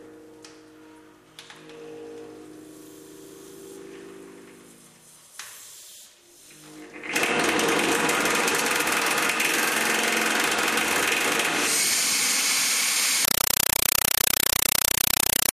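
At 13.25 s the sound gives way to loud, chattering static that runs to the end. That's a compressed stream played as audio: an AC-3 bitstream, going by the pattern, treated as raw samples rather than decoded, so you hear 5.33 ms noise bursts 31.25 times a second.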